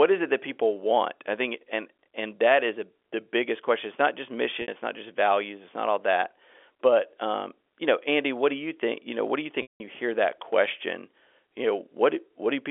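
At 4.62 s, right after "not just", a 60 ms gap is bridged by packet loss concealment with pitch repetition: the last pitch period loops, giving a brief held buzz, which fits three 20 ms packets. At 9.62 s, after "know what do you", a 180 ms loss repeats and fades to silence before "you hear that question" cross-fades back in. Unlike a plain dropout, the gap is filled with periodic tone, not silence, all within the narrow telephone band.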